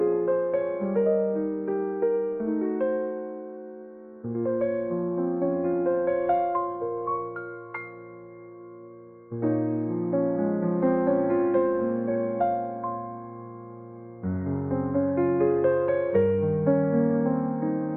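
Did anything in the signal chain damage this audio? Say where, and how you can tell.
No, none of the chain's stages leaves an audible mark on this audio: no dropouts, clicks, clipping or level jumps to point to a failing link.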